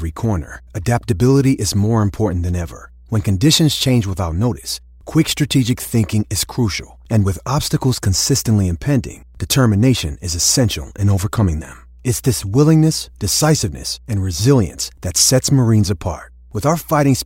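A steady low tone at 60 Hz, with some low harmonics, sits under the speech from start to finish, roughly 25 dB below it. This is mains hum: a ground loop or nearby transformer has coupled the power line into the signal path.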